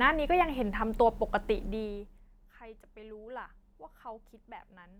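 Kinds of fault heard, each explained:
No faults heard.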